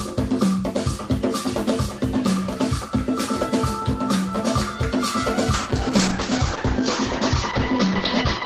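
A call bitrate drop at 5.54 s, consistent with an 8 kbps encode, cuts everything above 8 kHz, leaving the audio muffled and coarse through the end.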